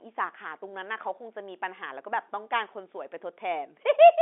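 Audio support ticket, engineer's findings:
No faults found on this one: the speech comes over a normal telephone line with G.711 telephone coding, which holds the sound to roughly 250 Hz to 3.5 kHz with nothing above 3.8 kHz, just as a fixed line should.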